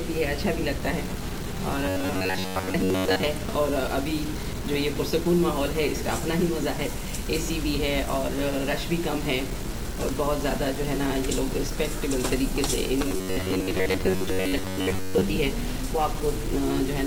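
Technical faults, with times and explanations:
Throughout: low bit depth without dither. A coarse, grainy distortion rides on the sound and changes character as the level moves. The error sits only about 15 dB below the signal. This fits audio that was likely truncated to around 5 bits with no dither added. Because the rounding error is locked to the waveform, it is heard as distortion that follows the sound.
1.86–3.23 s and 13.08–15.21 s: robotic sound from repeated short buffers. In both stretches the audio turns into a rigid, metallic buzz pitched at 93.8 Hz, while the rough contour of the underlying sound still comes through. The likely cause is that fresh audio was arriving too slowly and each gap was filled by replaying the last slice of about 10.7 ms. Most of the time in these passages is repeated material, and those fixed-length repeats impose the buzzing pitch.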